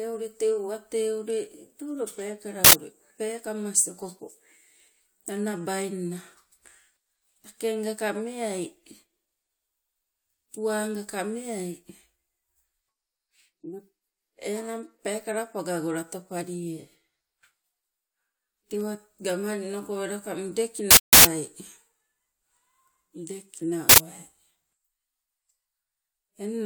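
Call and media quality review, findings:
Uninitialised buffer: loud digital-noise bursts at 2.65–2.73 s (just before "peekamas okopo"), 20.91–21.25 s, 23.89–23.98 s; playback reading unwritten memory, fits 4096- and 16384-sample blocks.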